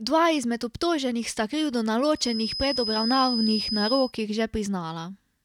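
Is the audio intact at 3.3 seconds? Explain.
No. A feedback whistle runs from 2.10 to 4.14 s: a thin, steady 5 kHz tone a few dB below the speech, swelling and fading slowly, likely from a loudspeaker-to-microphone loop held at the edge of feedback. A spectrogram shows one narrow horizontal line at 5 kHz.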